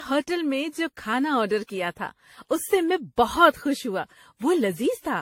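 Throughout the speech, the sound is swirly, hollow and smeared, with blurred attacks and nothing above 16.5 kHz. This is generation loss. The likely cause is about seven rounds of lossy AAC coding near 64 kbit/s, each pass piling new noise onto the last.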